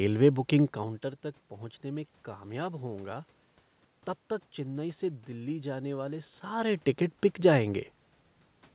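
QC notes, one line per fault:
No faults found; content stops near 4 kHz, consistent with a narrowband telephone codec such as G.711, and the room noise and level shifts from the talker moving, early on and again around 6.5 s, belong to the recording.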